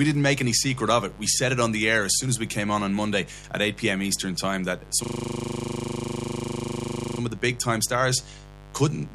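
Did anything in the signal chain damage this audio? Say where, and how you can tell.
Yes, two things. First, in the analogue wiring, there's a mains buzz under the speech for the whole clip, sitting about 20 dB below the signal. It's raspy, not a smooth hum, because the interference arrives as sharp spikes twice per cycle of 50 Hz mains, so the harmonics stack up well into the kilohertz range. That points to a dimmer, rectifier or poorly shielded cable coupling in before the converter.

Second, at the driver or buffer stage, there's a system hang loop from 5.04 to 7.2 s. The same 40 ms slice of audio repeats exactly, over and over, at 25 Hz, so it reads as a steady buzzy drone instead of a stutter. The host froze while the sound hardware kept replaying its ring buffer, which fits a buffer of about 40 ms. When it recovers, the speech picks up with essentially nothing missing.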